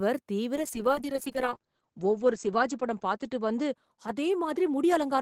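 From 0.59 s to the end, a call bitrate drop starves the encoder: the speech turns coarse and muffled, audio bandwidth collapsing from 20 kHz to 8 kHz, consistent with 48 falling to 9 kbps.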